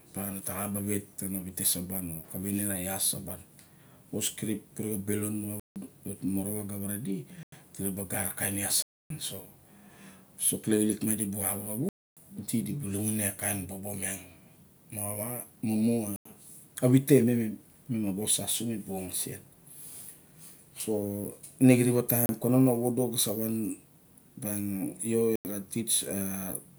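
Seven blocks of digital silence drop into this speech, at 5.60 s (about 160 ms), 7.43 s (93 ms), 8.82 s (279 ms), 11.89 s (279 ms), 16.16 s (93 ms), 22.26 s (32 ms, just before "kanon a") and 25.36 s (93 ms). Each time the output buffer likely wasn't filled in time, so zeros went out instead. The repeated 93 ms gaps fit a 4096-sample buffer. With no fade, the sound cuts out and back abruptly. The short ones sound like pops, and the longer ones are audible holes.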